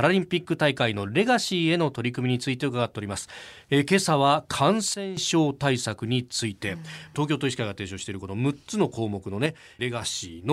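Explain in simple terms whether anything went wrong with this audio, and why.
A sudden gain jump happens twice in this speech clip. From 4.94 to 5.17 seconds the whole sound drops sharply in volume, then returns, and from 9.46 to 10.02 seconds it drops again, less deeply. The voice and the background noise go quieter together, all at once, rather than fading. The likely cause is a volume setting being switched instantly, from one moment to the next, with no smooth ramp between levels.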